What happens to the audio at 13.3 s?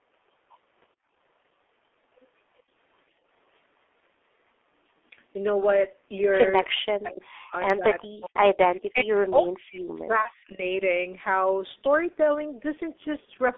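From 13.25 to 13.30 s the sound briefly turns into a buzzy tone or coloured noise that fades. This is VoIP packet loss concealed by the speech codec: the decoder stretches its last pitch and filter over a gap that fits a single lost 30 ms frame, lowering the gain as it goes. Throughout, the audio is muffled and hoarse, with blurred consonants, from the heavily damaging G.723.1 codec at 6.3 kbit/s, which confines the sound to roughly 300 Hz to 3.5 kHz.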